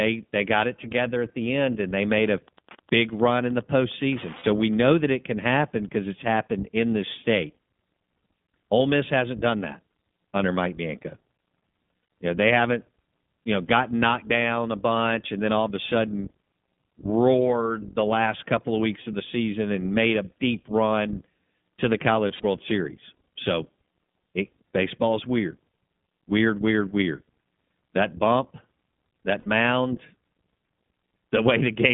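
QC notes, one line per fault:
Throughout, iLBC codec: speech is band-limited to roughly 150 Hz–3.5 kHz and sounds clearly rough and slightly synthetic, because each 20 ms frame's excitation is coded independently at a low rate, which fits about 15.2 kbps. A spectrogram shows an empty band above 3.5 kHz and smeared harmonics.
2.07–5.07 s, Wi-Fi interference: after "the end and they" and until "it can happen because", a steady tick repeats every 102.4 ms, about ten per second, roughly 25 dB below the speech. A nearby radio's beacon is being rectified by the audio circuit. The waveform shows regularly spaced thin spikes, and the spectrogram shows evenly spaced vertical lines.
4.38 s, 12.02 s, 22.28 s, 29.40 s, lost iLBC frames: gaps of 60, 80, 100 and 60 ms. The one after "deep run to the" is scattered over 160 ms, with its longest run about 70 ms. The decoder repeats the last pitch cycle mixed with noise, so each gap sounds like a held, buzzy vowel, and normal speech returns at once. 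A spectrogram shows flat, frozen harmonic stripes at each gap.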